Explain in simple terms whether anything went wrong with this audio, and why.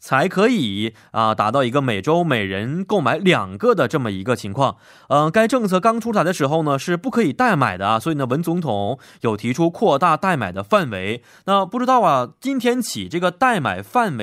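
Nothing went wrong here; the speech comes across without any technical problem to be heard anywhere along the way.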